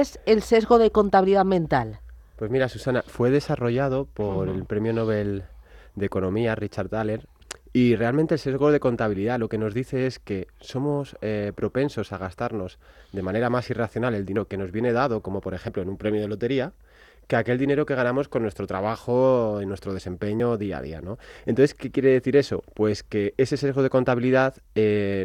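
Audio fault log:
14.36 s, 15.68 s and 20.4 s, dropped buffer (overrun): each is the sound jumping straight ahead, with no gap. The likely cause is audio not collected before being overwritten, losing about a tenth of a second at 14.36 s and a few tens of milliseconds at the other two points.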